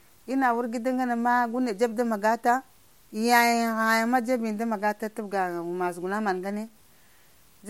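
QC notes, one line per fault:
Throughout: low bit depth without dither. Quiet passages of the speech turn grainy and gritty, and the faintest tails sputter or drop to silence. The distortion tracks the signal, sitting roughly 35 dB below it. This fits truncation to about 9 bits without dither, the likely cause.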